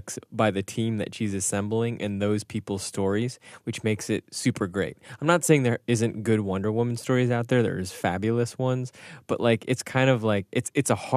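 No technical faults can be heard anywhere in this speech recording; the signal stays steady and intact throughout.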